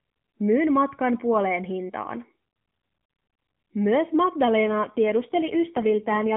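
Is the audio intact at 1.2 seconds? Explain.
Yes, at 1.2 s the speech is intact, with no fault at that moment.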